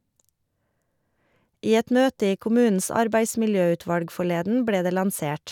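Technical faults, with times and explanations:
No technical faults can be heard in this speech recording, and the signal holds steady over its whole length.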